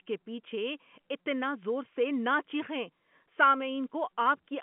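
No technical fault can be heard: the speech carries the ordinary narrowband sound of G.711 A-law telephone coding, with the line band running from about 150 Hz to 3.4 kHz and nothing above 3.7 kHz, and any coding noise under the speech is faint at most.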